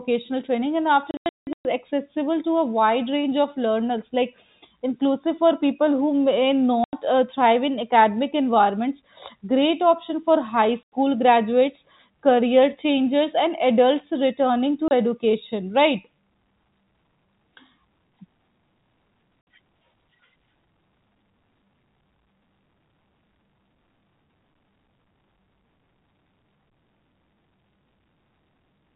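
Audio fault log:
1.11–1.65, 6.84–6.93, 10.84–10.89, 14.88–14.91 and 19.41–19.47 s: packet loss filled with silence. Packets go missing and the gaps play as silence. The holes come in steps of 30 ms, which fits 30 ms packets. The worst patch, 1.11–1.65 s, loses 420 ms, with a longest run of 180 ms. The holes have hard edges against the narrow telephone-band sound.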